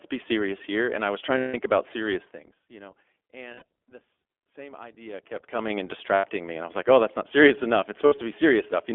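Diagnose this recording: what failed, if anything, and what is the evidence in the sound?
The speech is band-limited and slightly rough and synthetic throughout, with nothing above roughly 3.4 kHz and little below 300 Hz. That points to the codec stage: the iLBC codec, a narrowband VoIP coder that encodes each frame's excitation independently of the previous frame. The audible coarseness fits its 15.2 kbps mode with 20 ms frames, and the codec damage is plainly audible across the whole clip.

Four short held, buzzy vowel-like stretches replace the speech: 1.38–1.55 s just after "I was trying" (about 160 ms), 3.54–3.62 s between "you know" and "this same" (80 ms), 6.14–6.26 s (100 ms), and 8.06–8.14 s after "that's not serious enough" (60 ms). These are lost iLBC frames at the network stage. The decoder repeats the last pitch cycle mixed with noise, and the longest gap fits eight 20 ms frames. 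The voice is right again almost at once afterward because each frame decodes independently.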